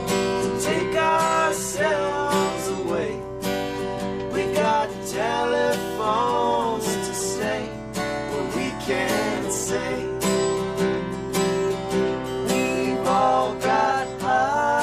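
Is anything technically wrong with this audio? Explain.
No, nothing technically wrong turns up anywhere in this audio.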